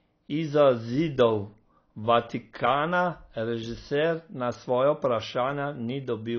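AAC compression runs from start to finish: nothing remains above 6.6 kHz, leaving the speech dull, smeared and fizzy on sibilants. This is likely AAC-LC at a low bitrate, around 24 kbps, where the encoder lowers its cut-off and coarsely quantises the remaining frequency bands.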